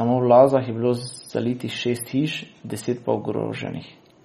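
Speech carries plainly audible MP3 compression damage from start to finish, likely from an encoder starved of bits, which fits a low bitrate around 32 kbps. The encoder has discarded everything above 14.3 kHz, so a spectrogram shows a hard, flat ceiling there, and weak frequency lines below it flicker on and off frame to frame as scattered holes. The result sounds watery and swirly, with metallic chirps on s sounds and softened attacks.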